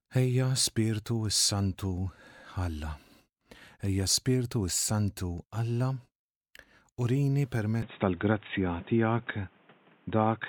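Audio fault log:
7.82–10.48 s, input switched to a poorer device: at 7.82 s the speech abruptly turns dull and boxy, with nothing above 3.8 kHz, and the level shifts by around 5 dB. A new, faint background noise sits well below the speech, with no silence at the join. This is likely a change to another input device. Unlike a plain low-pass filter or codec bandwidth drop, the tone, level and noise floor all change together at one instant and stay changed.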